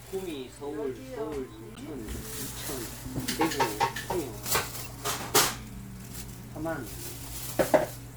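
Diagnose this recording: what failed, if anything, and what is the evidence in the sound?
The fault sits at the codec stage: a corrupt frame was decoded. Two short, spurious bursts stand out against the sound, one from 1.75 to 1.80 s and a louder one from 4.84 to 4.91 s, with error energy peaking near about -30 dBFS and about -25 dBFS. Each spans a few compressed frames. Flipped bits in those frames were not rejected, so the decoder applied wrong gains and misread codes and placed energy at frequencies where none belonged.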